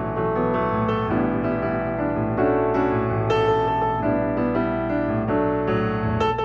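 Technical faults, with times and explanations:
Throughout, mains hum: a steady low tone at 60 Hz sits under the whole clip, with some low harmonics stacked above it, and it is loud, only about 10 dB below the wanted sound. Power-line current has leaked into the signal path, most likely through a ground loop or a nearby transformer. Unlike rumble or wind noise, which wander and spread across the low end, this hum holds one fixed pitch and never changes in level.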